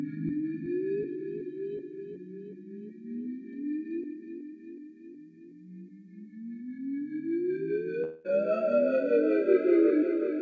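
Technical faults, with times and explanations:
8.04–8.29 s, long network dropout: for about a quarter of a second the sound turns into a smeared, buzzy continuation of what came just before. It fades rather than cutting off dead, and then the real audio returns with a tiny jump where about 4 ms went missing. That's likely the receiver stretching its last good audio across roughly 200 ms that never arrived. The fill runs about 205 ms, all of it band-limited to 8 kHz by the G.722 call path.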